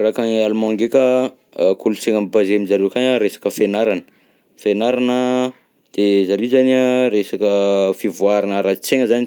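No technical faults can be heard anywhere in the speech; the signal stays continuous and steady throughout.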